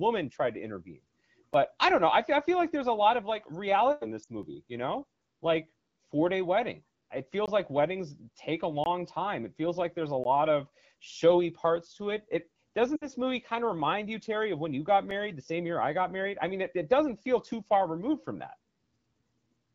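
Right at 1.54 s there's a tiny tick, the first of several blocks of digital silence. A stretch of audio cuts to silence with no fade. The likely cause is the output buffer not being filled in time. At 4.23 to 4.27 s, about 40 ms of lost AMR speech frames makes the speech drop to near silence as the decoder repeats its last good settings at falling gain. Another dropout ticks at 4.43 s, just before "you know like four". Longer holes of about 20 ms, heard as pops, come at 7.46 s, right before "like weddings take a", and at 8.84 s. A 15 ms hole lands at 10.24 s, between "feels like there's a" and "of showy parts to". At 12.95 to 13.07 s a longer run of lost frames, about 60 ms, drops the sound to near silence before it comes back rough. The last dropout is a small tick at 15.11 s. Underneath all of this the HD Voice wideband codec sounds clear, with only light damage, which fits a rate of around 12.65 kbit/s.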